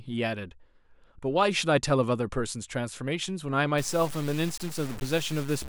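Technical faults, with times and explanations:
3.78–5.68 s, low bit depth without dither: the speech was most likely reduced to about 5 bits by truncation with no dither, so each sample is chopped down to one of very few levels and the error tracks the waveform itself. That error sits only around 15 dB below the speech, heard as a coarse, grainy distortion that shifts with every syllable, with quieter stretches turning gritty rather than fading smoothly to the clip's end.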